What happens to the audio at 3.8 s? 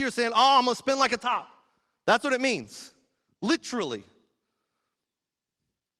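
At 3.8 s you're in the middle of a call bitrate drop running from about 2.54 to 4.15 s. The encoder coarsened to what sounds like roughly 17 kbps, down from about 32, so the speech turns rough, watery or muffled before clearing once the bitrate recovers.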